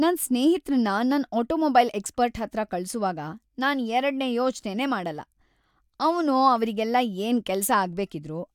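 No audible faults present.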